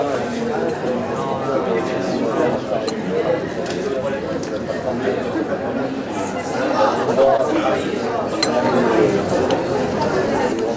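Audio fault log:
7.37–7.40 s short concealed packet loss: about 20 ms never arrived in time, so the decoder stretched the preceding sound over the gap, leaving a quick smear.
8.65–10.53 s sudden gain jump: sound and background noise step up together by about 4 dB, likely a digital gain change applied instantly with no ramp.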